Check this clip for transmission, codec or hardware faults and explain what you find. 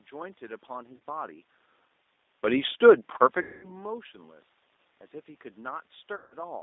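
Yes, there's a couple of things going on. Throughout, the G.729 codec is audibly at work: at 8 kbit/s it rebuilds speech from a vocal tract model and a few pulses, so the band is squeezed to about 250 Hz to 3.7 kHz and everything sounds rough and synthetic.

Then there's VoIP packet loss concealed by the speech codec at 0.97 to 1.00 s, 3.42 to 3.74 s and 6.16 to 6.35 s. The decoder stretches its last frame into a fading buzz or coloured noise, and the second gap is the longest.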